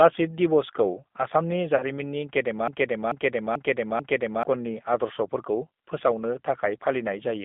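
Speech heard through the G.729 codec for its whole length. Everything above about 3.6 kHz and below about 200 Hz is gone, and the voice has the slightly rough, synthetic grain of a low-rate coder rebuilding it from a vocal tract filter, a pitch predictor and a few pulses per frame. That damage is plainly audible and fits an 8 kbit/s G.729A link. Ordinary narrowband filtering would dull the sound without adding that rasp. From 1.76 to 1.83 s there is VoIP packet loss concealed by the speech codec. About 40 ms of signal is missing, which fits two lost 20 ms packets. The decoder stretches its last pitch and filter state into a fading buzzy tone or coloured noise, and the voice stays weakened briefly after real packets return. That carry-over separates it from a plain dropout, which would be a clean silence or a click. From 2.68 to 4.43 s a broken-record loop takes over. A single piece about 0.44 s long plays back to back, exactly identical, four times, and the speech that belonged in that stretch never arrives. 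The cause is likely a stalled player or stream resending its last buffered fragment. Its identical repeats and fixed period set it apart from an echo, which would fade and overlap the following sound.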